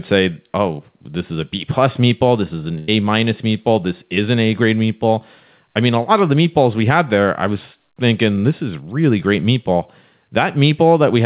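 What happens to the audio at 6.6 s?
Nothing goes wrong at 6.6 s; the speech carries straight through that moment without a break, with the narrowband character of the call path, which passes nothing above 4 kHz, unchanged there.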